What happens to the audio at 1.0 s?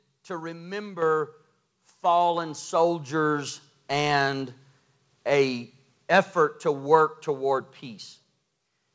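At 1.02 s the microphone volume is stepped up: the call software raises the input gain by about 8 dB in one step, so voice and background jump louder together. The waveform envelope steps up abruptly, and the spectrogram brightens across the whole band at once, up to its 8 kHz ceiling.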